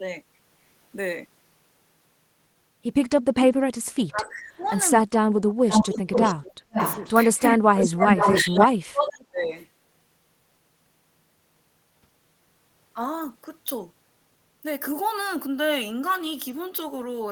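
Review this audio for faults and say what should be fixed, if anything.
The speech dips by up to about 30 dB at 4.09–4.72 s, 5.29–7.62 s and 8.32–9.54 s. This is speech suppressed in double talk, likely because an echo canceller mistook overlapping talk for echo. Tuning the canceller's double-talk detection so near-end speech isn't attenuated would prevent this.

A delayed copy of the audio returns, quietly at 4.26–4.66 s (356 ms) and 9.43–9.53 s, and near full level at 5.71–6.32, 6.73–7.41 and 7.75–8.65 s (485 ms). This is echo leak, likely from loudspeaker pickup the canceller didn't remove. Using a headset, or letting the far-end canceller converge properly, would prevent this.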